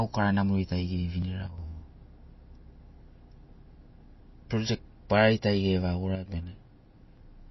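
From start to finish the speech carries plainly audible MP3 compression, likely from encoding at a very low bitrate, which fits something around 24 kbps. With so few bits the encoder has cut everything above 5.8 kHz, so s sounds lose their hiss and turn dull. Weaker frequency components flicker in and out between frames, giving a watery, swirling edge. On a spectrogram this appears as a hard horizontal ceiling at 5.8 kHz with patchy, blocky gaps in the energy below it.

At 1.22 s there is a skip where audio is missing between chunks. About 30 ms of sound is gone, likely dropped while the recorder closed one processing chunk and opened the next. The material on either side is butted together with no silence, so the speech jumps forward abruptly. In the waveform this shows as a sudden discontinuity in the wave shape rather than a flat gap. On a spectrogram it is a thin vertical seam where the harmonic traces break and resume slightly out of step.

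From 6.15 to 6.28 s one channel drops out, likely a brief loss of one side of the stereo signal. In the combined playback the level falls abruptly by about 6 dB for roughly an eighth of a second and then snaps back. Anything carried only by the missing side vanishes for that span. The waveform shows a short, sharp-edged dip in amplitude. The spectrogram shows a uniformly dimmer vertical band across all frequencies.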